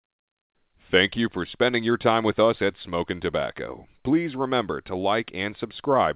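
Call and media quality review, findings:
No faults found in this speech audio.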